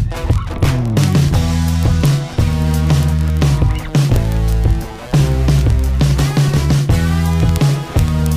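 From 0.11 s right through to 8.35 s there's a steady stream of word clock ticks, one roughly every 20 ms. The receiving clock is running about a tenth of a percent off the sender's, so every slip drops or repeats a single sample, and that's the sharp, uneven ticking.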